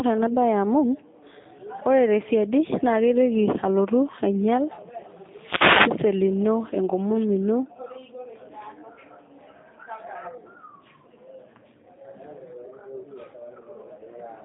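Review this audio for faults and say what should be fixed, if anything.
The speech sounds narrow, slightly rough and synthetic from start to finish, with no air above about 3.7 kHz and thin lows below about 150 Hz. This is G.729 codec damage: the sound fits an 8 kbit/s G.729A path that rebuilds each 10 ms frame from a vocal tract filter, a pitch predictor and a few pulses, so fine detail is lost. To prevent it, carry or record the audio through a wideband, higher-bitrate codec instead of G.729.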